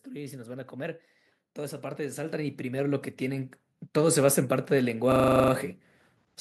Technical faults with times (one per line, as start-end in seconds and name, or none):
0.05-5.71 automatic gain rising
5.12-5.52 system hang loop